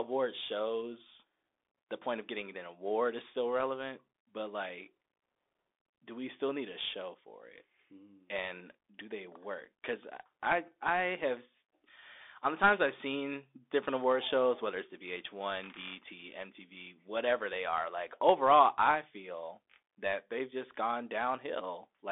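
From start to finish, the speech carries the Bluetooth CVSD headset codec. The band runs from 300 Hz to 3.6 kHz, with nothing above 3.8 kHz. This fits a 64 kbps one-bit delta link, whose adaptive step lags fast high content, leaving scratchy sibilants and granular hiss.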